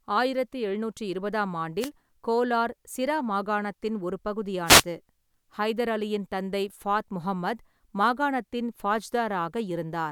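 Speech with two wireless microphone noise hits, at 1.80–1.90 s and 4.65–4.84 s: brief static swishes as the analogue FM radio link fades and receiver noise rises.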